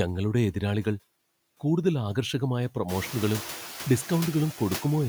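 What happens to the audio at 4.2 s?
At 4.2 s the clip shows noise suppressor artifacts, which run through the whole recording. The suppressor estimates which frequency bands hold steady noise and attenuates them frame by frame, by about 4 dB here. Between words the background sinks, and under speech it returns. Around 4.2 s the room noise is higher: it rose by about 17 dB at roughly 3 s and now sits about 16 dB below the speech.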